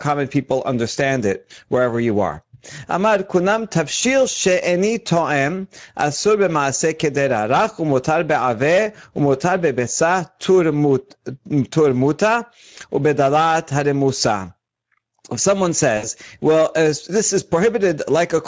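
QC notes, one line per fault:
throughout: gain pumping. The level ducks by around 10 dB under each loud syllable, so loud and soft passages sit squashed together. The likely cause is microphone gain set far too high, with a fast limiter clamping each peak.
throughout: Speex codec damage. The speech sounds plainly noisy and hoarse. What little sits above 4 kHz is a hissy fill, and nothing survives above 8 kHz. This fits a mid-quality Speex setting of about 16.8 kbps, which has too few bits to rebuild the excitation cleanly.
3.99 to 4.02 s and 15.97 to 16.08 s: VoIP packet loss concealed by the speech codec. The sound smears into a short, fading stretch where the decoder filled in the gap. The second gap is longer, about 60 ms, between "if someone" and "well uh this is". The decoder extrapolated its last pitch and filter across the missing frames, and the following audio stays weak for a moment after packets return.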